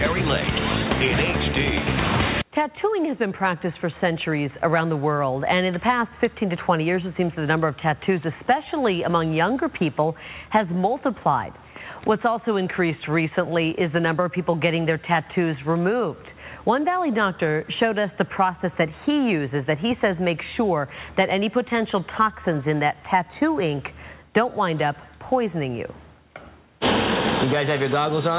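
No faults are audible; the audio comes through a call path band-limited to nothing above 4 kHz, which fits a narrowband G.711-type codec at 64 kbps.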